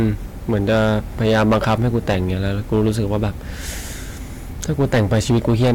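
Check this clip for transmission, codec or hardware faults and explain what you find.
One fault runs through the whole speech clip: hard clipping. Driven about 11 dB past full scale, around one sample in twenty is sheared flat, adding high harmonics heard as harsh fuzz on every loud syllable.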